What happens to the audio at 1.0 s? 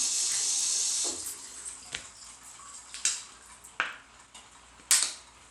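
At 1.0 s the audio carries the same damage that runs through the whole clip, most likely Bluetooth SBC compression. The sound is split into a handful of broad frequency bands, and with too few bits to share out, the upper bands are starved and the rest are coarsely quantised. The treble thins and flickers in and out, and a gritty, aliased roughness rides on the sound, which fits a low bitrate of around 96 kbps.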